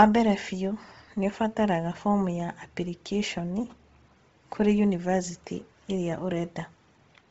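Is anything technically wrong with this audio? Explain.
Yes. Throughout the speech there is heavy damage that is likely from Bluetooth LC3 compression. Nothing is present above 7.8 kHz, and the remaining upper band sounds breathy and grainy, where the codec discarded detail and filled it with noise. This fits a low rate near 24 kbps and 7.5 ms frames.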